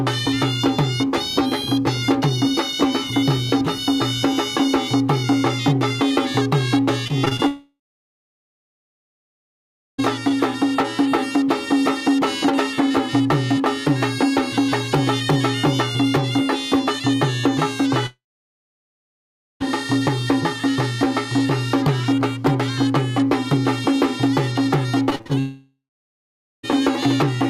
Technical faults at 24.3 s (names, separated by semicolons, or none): none